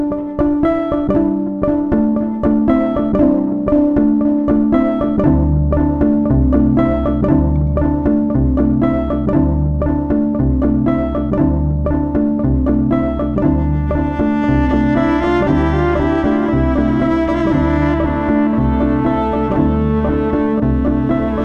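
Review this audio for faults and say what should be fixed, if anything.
Nothing in the audio calls for a fix. No faults turn up anywhere in it, so it can stay as it is.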